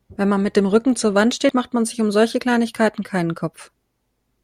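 At about 1.49 s there's a quick blip in the speech, which is damaged data in the compressed stream. A short run of corrupted bytes trips up the decoder, so it misreads that bit of the file and loses its footing before locking back on.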